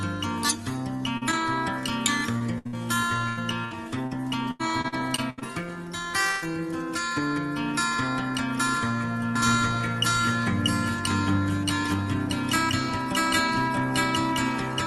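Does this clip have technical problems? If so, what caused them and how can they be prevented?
Yes. Short concealed packet loss appears at 1.17 to 1.23 s and 1.31 to 1.34 s. Each 20 to 40 ms hole was patched by extending the preceding sound, heard as a tiny smear or wobble. A spectrogram shows brief smoothed, repeated-looking columns. A larger jitter buffer and forward error correction would prevent these.

Repeated packet loss (robotic sound) runs from 2.38 to 5.43 s. Twelve gaps, the longest 84 ms, were filled in turn, covering about a fifth of that span, so the audio turns choppy with pieces missing. The spectrogram shows striped, smeared patches recurring through the stretch. A steadier network link with more jitter buffering would prevent it.

A burst of packet loss at 6.31 to 6.44 s removed about 100 ms. The receiver stretched the last sound into a fading buzz or hiss before resuming later on. 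The waveform shows a short decaying, uniform segment. Redundant encoding or a more stable connection would prevent it.

A doubled audio track starts abruptly at 9.36 s and lasts to the end. A second, roughly equally loud copy trails about 0.7 s behind, most likely from a second capture path or misaligned edit. Spectrograms show every feature repeated at that offset. Muting the duplicate source or aligning edits prevents it.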